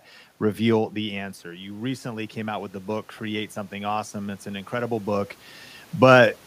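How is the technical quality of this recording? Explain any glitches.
The recording has one glitch, an automatic gain rising. From 0.94 s to 5.38 s, after the talker moves back around 0.5 s and the input drops by about 10 dB, the voice and room noise swell together. The automatic gain control raises its gain by about 8 dB to compensate, recovering only part of the lost level. The talker moves again near 5.0 s.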